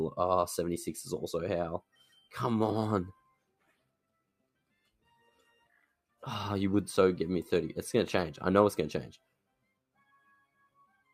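All the way through, the level breathes in an unnatural way. Sharp onsets come through intact, but anything held or fading sags and flutters, with the gain swinging by roughly 10 dB as the processing reacts. This is a noise suppressor applied to music or sounds: a processor built for speech is treating sustained, tonal and reverberant material as background noise and pulling it down, so the audio pumps and thins instead of keeping a steady body.

Three stretches are hit much harder, with the sound cut by the noise suppressor: from 1.8 to 2.34 s, from 3.13 to 6.23 s, and from 9.17 s to the end. In each, held material and decay tails drop away, at worst by about 21 dB, leaving mostly transients audible. The middle stretch lasts about three seconds. Here the suppressor classed the sustained content as noise and attenuated it far more deeply than elsewhere, cutting tails short.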